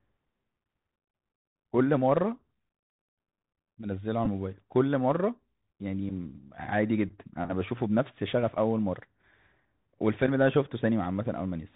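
The whole recording passes through a narrowband Bluetooth headset link using the CVSD codec, which fits a 64 kbps CVSD stream. The codec encodes each sample as a single up-or-down bit with an adapting step, so nothing above 4 kHz survives and the speech sounds boxed in. The damage is plainly audible: louder high-frequency sounds outrun the step and distort, s sounds come out scratchy, and a granular hiss sits beneath the speech.

At 4.25 s there is a Bluetooth headset packet repeated fault. Voice packets between headset and phone were lost, and the chip decoded the previous packet's bits again to fill the gap of about 11.2 ms, which fits three repeated packets. Repeating a 3.75 ms packet back to back produces a short buzzy burst near 267 Hz that interrupts the speech before good packets resume.

At 6.09 s the same packet-repeat fault recurs, this time covering about 7.5 ms, which fits two repeated packets. 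The repeated decoding briefly replaces the speech with a shorter burst of the same buzz, heard as a quick rough blip in the sound.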